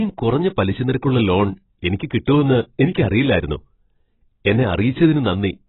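Throughout the speech, the sound is dull and smeared, with nothing above 3.9 kHz and a warbling, fizzy texture on sibilants. This is likely heavy AAC compression, consistent with AAC-LC at a low bitrate around 16 kbps, which strips the highs and quantises the remaining spectrum coarsely.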